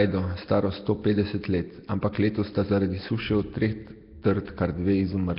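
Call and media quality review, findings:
Likely Nellymoser compression across the whole clip: heavy low-bitrate coding, consistent with roughly 22 kbps, starves weak bands that are then noise-filled. The speech sounds rough, hissy and underwater.

Dropped samples at 3.88 s, just after "od treh": likely a capture or buffer glitch losing a couple of samples. The waveform jumps, producing one sharp click with no audible gap.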